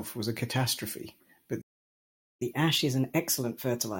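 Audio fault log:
1.61–2.42 s playback stall: the player likely ran out of buffered data or was blocked, so the speech drops to silence for 794 ms before resuming.
2.42–3.99 s catch-up at higher speed: the player resamples its backlog at 1.1x to regain lost time, so the speech runs faster and sits roughly one and a half semitones higher.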